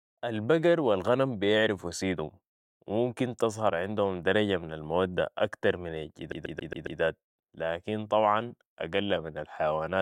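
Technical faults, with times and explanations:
6.32 to 7.01 s, CD stuck on one turn: the speech locks into a rapid, even stutter, the same 137 ms fragment playing five times in a row, with a brief mute at each jump back before normal playback resumes. A scratch on the disc kicks the laser back one track at the same point on every revolution, so that short slice is reread on each turn, producing the mechanical, regular repetition typical of a skipping CD rather than any natural hesitation.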